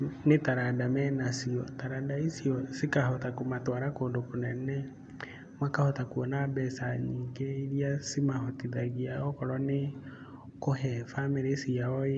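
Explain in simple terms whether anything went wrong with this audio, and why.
Nothing went wrong: the speech has no audible technical faults anywhere in the recording.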